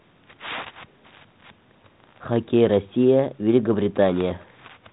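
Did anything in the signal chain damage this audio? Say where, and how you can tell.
No, nothing in the chain damaged this speech: it passes through G.726 ADPCM at 32 kbit/s, the DECT cordless rate, which limits the band to 4 kHz and leaves only a light coding texture.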